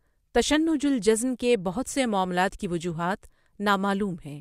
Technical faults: none

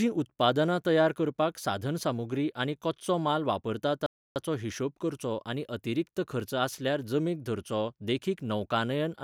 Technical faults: playback stall

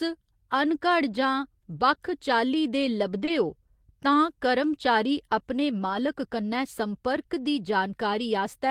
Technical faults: lost packet rebuilt from error correction; short concealed packet loss

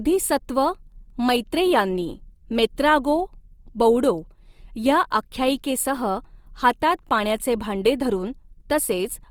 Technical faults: Opus compression

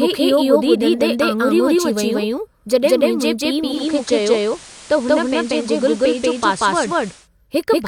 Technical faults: doubled audio track; digital radio blending to analogue

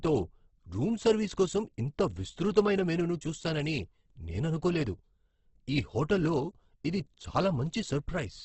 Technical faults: Opus compression

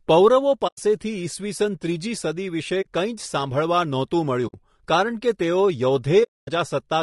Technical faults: low-delay AAC compression; AAC frame loss with muting

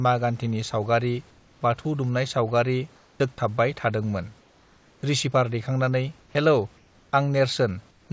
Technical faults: comfort noise in place of the background; onset clipped by the voice detector

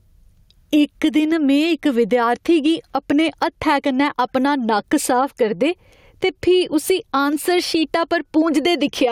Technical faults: gain pumping

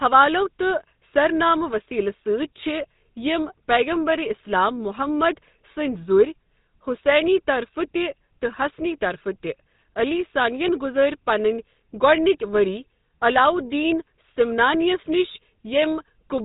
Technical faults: GSM full-rate codec

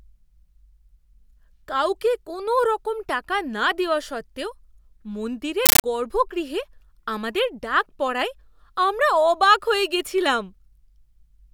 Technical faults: compressed stream played as audio

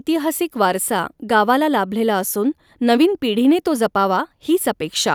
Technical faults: none

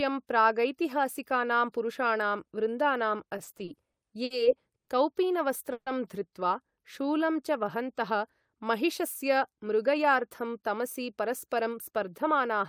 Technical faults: repeated stalls (stutter); jitter buffer slow-down; jitter buffer speed-up

